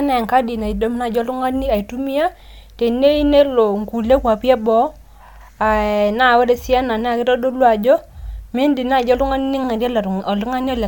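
Nothing goes wrong anywhere in this bit of speech, so there's no technical fault to point to at any moment.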